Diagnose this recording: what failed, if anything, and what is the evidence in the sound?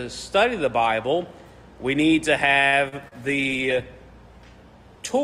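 A short stall from a late packet sits in the network and jitter-buffer stage at 2.67 to 2.75 s. One packet missed its playout deadline, so the buffer ran dry. The receiver held the last sound for about 51 ms, then resumed where it had stopped. Nothing is lost. Instead, a sound is drawn out with a slight buzz or dip, and everything after it plays about 51 ms later.

Two instances of short concealed packet loss follow in the same network stage, at 2.88 to 2.95 s and 3.08 to 3.15 s. In each case 40 ms of audio never reached the decoder. The receiver extended the preceding sound, pitched or noise-like as appropriate, then crossfaded back. Each gap is heard as a brief smear or wobble, and a short sound there can disappear. The second repair adds a little extra time.

A call bitrate drop, a codec-stage effect driven by the network, begins at 3.23 s and lasts to the end. The bandwidth estimate fell, and the encoder was cut from 64 kbps to 19 kbps, staying at the lowest rate for about 1.8 s. 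With under a third of the bits, Opus quantises much more coarsely, so the audio turns rough and watery from that point on.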